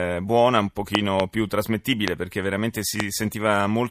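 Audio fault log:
0.95–1.22 s, 2.08–2.10 s, 3.00–3.02 s: loud pop. A double pop opens the run, then two single pops follow, each about 20 dB above the speech. The likely cause is a sudden voltage step, such as static or a switch, shaped by later circuits into a sharp thump. The speech continues beneath.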